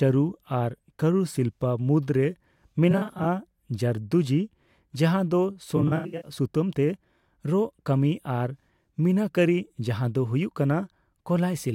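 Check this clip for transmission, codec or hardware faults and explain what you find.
Two bursts of AAC frame loss with concealment, at 2.91–3.25 s and 5.76–6.31 s. In each, audio frames went missing and the decoder patched the gaps by extrapolating from the last good spectrum. The first loses about 171 ms scattered over 341 ms, with runs no longer than around 40 ms. The second loses about 299 ms across 469 ms, with a longest run of roughly 100 ms. Both sound smeared, noisy or phasey, and the second is heavier.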